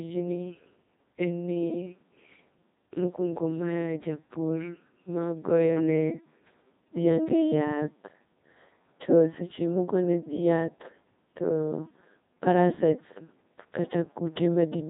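The whole clip passed through a Codec 2 vocoder, which keeps only pitch, voicing, energy and a spectral envelope and rebuilds the speech from sine waves. The damage is heavy, pointing to roughly 2.4 kbit/s, giving a robotic, buzzy voice with nothing above 3.7 kHz.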